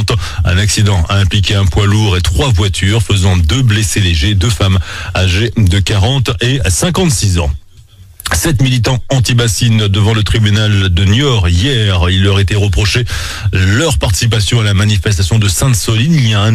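Crude rate conversion runs through the whole clip, from start to finish. The sample rate was changed by simple linear interpolation between neighbouring samples, with no anti-aliasing filter, which fits a conversion from 32 kHz up to 44.1 kHz. The leftover error repeats in a cycle set by those two rates and forms shifted, inharmonic copies of the sound itself, roughly 25 dB below it. It comes through as a gritty, inharmonic fizz riding on the louder and brighter passages.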